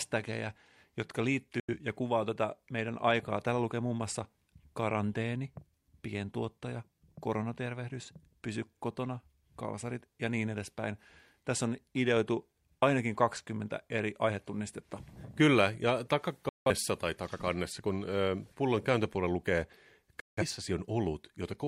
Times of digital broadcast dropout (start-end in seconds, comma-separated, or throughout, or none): 1.60-1.74, 16.49-16.70, 20.20-20.43